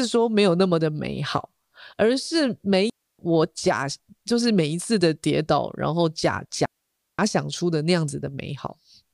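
A speech recording with two clean holes where the sound simply vanishes: the first from 2.90 to 3.19 s, lasting about 0.29 s, and a longer one from 6.66 to 7.19 s, about 0.53 s. Each cuts to near silence through a very brief fade, with no crackle or noise burst on either side. These are digital wireless dropouts: the radio link lost too much data, so the receiver muted its output instead of passing corrupted audio.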